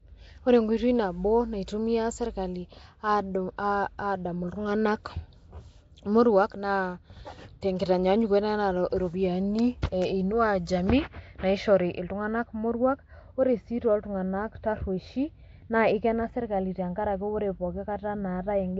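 From start to finish the speech carries a rough, hissy halo and a smeared, underwater quality, with nothing above 7.7 kHz. The likely cause is Nellymoser compression, which fits about 32 kbps: weak bands get no bits and are filled with noise, giving that grainy wash.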